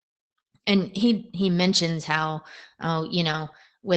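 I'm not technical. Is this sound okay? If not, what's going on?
No. Opus voice compression runs through the whole clip, so the speech sounds muffled and slightly rough. Everything above about 8.8 kHz is gone.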